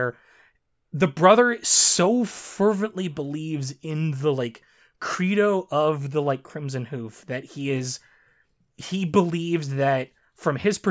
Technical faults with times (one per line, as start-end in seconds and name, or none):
none